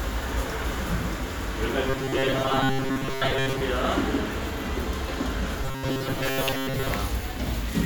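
From 1.88 to 3.61 s, and again from 5.64 to 6.92 s, the sound turns into a rigid, metallic buzz at 134 Hz, robotic sound from repeated short buffers. The likely cause is audio arriving too seldom, so a slice of about 7.5 ms is replayed in place of most of the real signal. On a spectrogram this shows as evenly spaced horizontal harmonics on a 134 Hz grid; the waveform shows one short shape tiling over and over.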